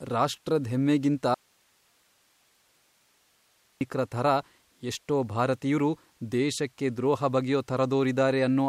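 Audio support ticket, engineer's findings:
Speech cuts out abruptly at 1.34 s, right after "ರಾಷ್ಟ್ರದ್ ಹೆಮ್ಮೆಗಿಂತ", and returns at 3.81 s. Gap of about 2.47 s holds only hiss, roughly 40 dB below programme level. Audio dropout to a faint residue. Likely cause: upstream signal lost while the downstream path stayed live, passing only its noise floor.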